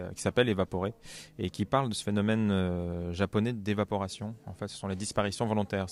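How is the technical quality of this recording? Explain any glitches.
No glitches to report: there are no dropouts, clicks, distortion or timing faults anywhere in the recording.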